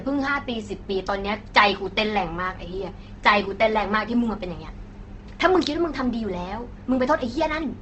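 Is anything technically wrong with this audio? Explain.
Yes. Opus compression runs throughout: the speech has nothing above 8.2 kHz and sounds grainy and rough, likely from Opus in its music mode at a low bitrate around 16 kbps. Short of bits, the encoder fills bands with noise or folded copies of lower bands.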